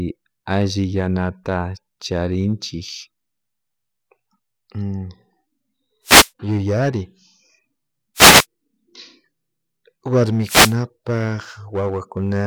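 Three wireless microphone noise hits break into the speech, at 6.04 to 6.30 s, 8.15 to 8.46 s and 10.43 to 10.76 s. Each lasts about a quarter to a third of a second. The radio signal fades as reflections cancel. Receiver noise then rises as a brief swish of static over the voice.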